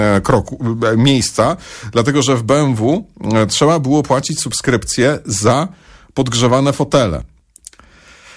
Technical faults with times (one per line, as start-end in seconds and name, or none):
none